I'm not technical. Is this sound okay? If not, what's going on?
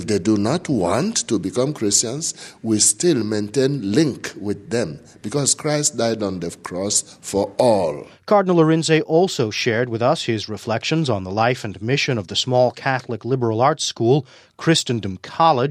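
Yes, nothing in the signal points to a technical problem at any moment, so the sound is fine as it is.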